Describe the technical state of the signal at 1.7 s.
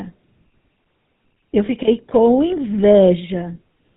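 Around 1.7 s the audio carries a brief rough, metallic ring from 1.66 to 1.70 s, where the sound is held rather than moving on. This is lost GSM frames: a bad frame was filled in by repeating the settings of the last good frame. The length of the glitch fits a single lost 20 ms frame, too short for the concealment to fade toward silence.

Underneath it, and through the whole clip, the speech has a plainly audible buzzy, gravelly roughness with no content above 4 kHz. That is the GSM full-rate codec, which fits the 13 kbps coder. It rebuilds speech from a vocal-tract model driven by regularly spaced pulses, keeping only every third excitation sample. The coarse excitation produces the grit, and the narrow band produces the dull, boxed-in top end.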